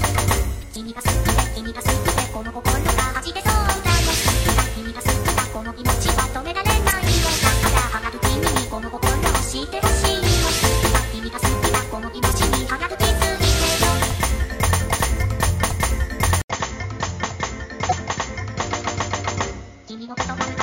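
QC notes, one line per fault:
0.59–0.63 s, 6.89–6.93 s, 12.29–12.34 s and 17.88–17.93 s, damaged data in a compressed stream: four short glitches, each around 44 ms long. Corrupted bytes make the decoder misread those frames and lose sync, so it spits out garbage briefly and skips ahead to the next clean frame header.
16.42 s to the end, input switched to a poorer device: after an 80 ms gap the sound turns dull and a bit quieter, with nothing above 7.1 kHz and a faint new noise floor well below the signal. That's likely the recording jumping to a narrower-band mic or headset profile mid-take.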